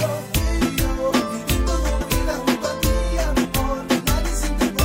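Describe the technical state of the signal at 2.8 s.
At 2.8 s the signal is intact, with no audible fault at that moment.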